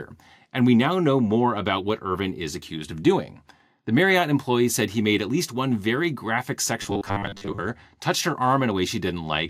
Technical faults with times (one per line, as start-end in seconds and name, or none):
6.82-7.58 robotic sound from repeated short buffers